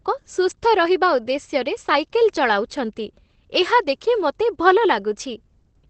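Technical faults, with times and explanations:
Throughout: Opus voice compression. Nothing is present above 8.6 kHz, which leaves the speech muffled. The SILK linear-prediction coder quantises the excitation coarsely, adding a plainly audible hoarse, slightly robotic edge that fits a low bitrate of around 12 kbps.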